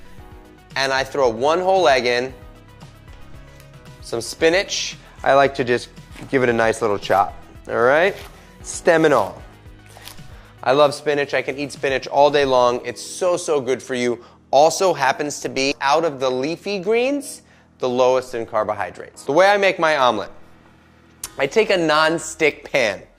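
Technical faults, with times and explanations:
No technical faults can be heard anywhere in the audio. There is nothing to flag at any point in the clip.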